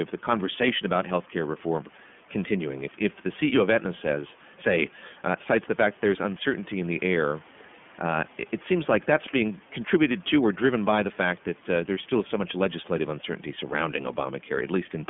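iLBC codec damage runs through the whole clip: the speech is squeezed into a line band of about 150 Hz to 3.4 kHz and coded in independent 30 ms frames, which fits the 13.33 kbps mode, leaving a plainly audible rough, synthetic edge, while room noise sits about 25 dB below the speech.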